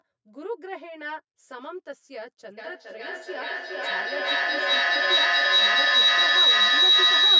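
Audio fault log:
Throughout: channel delay (comb filtering). The speech sounds hollow and phasey, with a fixed set of evenly spaced dips in the spectrum starting near 50 Hz. One channel arrives roughly 10 ms late, and when the two are summed to mono the shared sound cancels at those regularly spaced frequencies.
2.58 to 7.39 s: feedback howl. A piercing tone near 4 kHz swells until it sits about 15 dB above the speech, pulsing roughly every 400 ms and lasting to the end. The sound is circling between a loudspeaker and a microphone, gaining level on each trip and narrowing to the frequency the loop favours.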